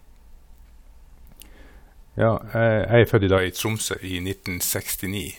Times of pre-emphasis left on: 3.38-5.39

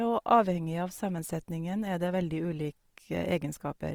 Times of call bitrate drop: none

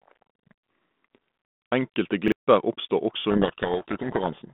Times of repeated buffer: 0.36-0.44, 2.28-2.32

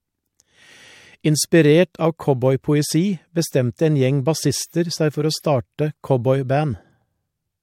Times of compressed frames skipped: 6.73

